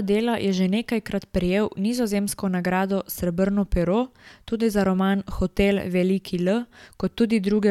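Dropped samples at 4.81 s and again at 6.49 s: each is a single sharp click in the speech, a thin vertical line across the spectrum. The likely cause is a handful of samples, well under a millisecond, missing from the stream, so the waveform jumps abruptly to a later value.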